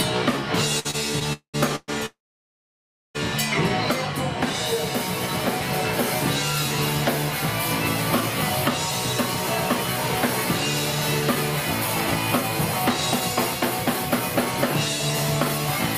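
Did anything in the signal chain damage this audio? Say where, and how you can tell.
Yes. Two short stalls from a late packet occur at the network stage, at 0.79 to 0.87 s and 0.91 to 0.96 s. The jitter buffer ran empty, so the last sound was held for 54 ms and 27 ms. On a spectrogram the partials run flat and smeared, and playback then resumes with nothing lost.

A call audio freeze, likely from packets delayed in transit, follows at 1.33 to 1.56 s, 1.76 to 1.90 s and 2.06 to 3.17 s. Each starts as a fading buzz or hiss, then goes silent for 100 ms, 20 ms and 0.98 s. The waveform shows a decaying tail and a flat gap.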